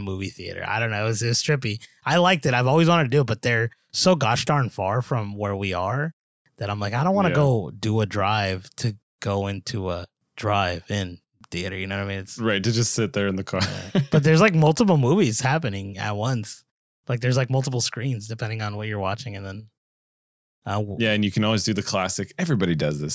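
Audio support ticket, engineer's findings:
Listened to the speech recording and found nothing to flag, so no action needed on this ticket.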